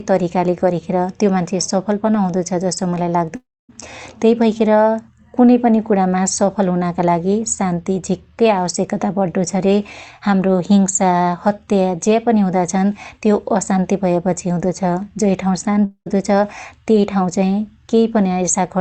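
At 3.35 s the speech cuts out for about 0.34 s, until 3.71 s. The last sound is stretched into a fading buzz and then drops to near silence before the speech resumes with that stretch missing. The same thing happens from 15.85 s to 16.08 s, with about 0.22 s lost and only a short silent tail. This is likely a long network dropout, with the receiver concealing lost packets through the call codec, which has a high-frequency cut-off near 8 kHz.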